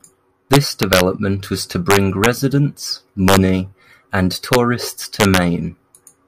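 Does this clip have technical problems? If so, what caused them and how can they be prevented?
Yes. The speech shows integer overflow at 0.53 to 1.01 s, 1.91 to 2.26 s, 3.28 to 3.37 s, 4.53 to 4.55 s and 5.20 to 5.37 s. There, peaks pushed about 1 to 4 dB past the integer ceiling wrap to the opposite sign, giving violent cracks rather than the flattened buzz of clipping. Saturating arithmetic or enough headroom before the final gain stage prevents it.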